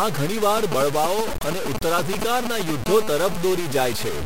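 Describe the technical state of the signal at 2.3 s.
At 2.3 s, the speech carries a gritty, grainy distortion that runs through the whole clip. It shifts with the sound, and quieter parts break up into rough steps. The likely cause is low bit depth without dither, with truncation to about 4 bits leaving the error not far below the signal.

GSM signalling bursts are also present at this moment, from 0.57 s to 2.71 s. A nearby 2G phone's short radio bursts are picked up and rectified by the audio circuit. The result is a galloping dit-dit-dit of short 217 Hz buzzes, only slightly below the speech.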